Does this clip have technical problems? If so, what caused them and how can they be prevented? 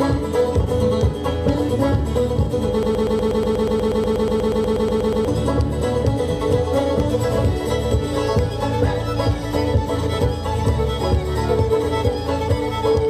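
Yes. A broken-record loop from 2.83 to 5.28 s repeats one 121 ms fragment 20 times, likely a stalled player or stream resending its last buffer; on a spectrogram it shows as identical stripes every 0.12 s. Prevent it with buffer-underrun detection that outputs silence or resynchronises rather than replaying stale data.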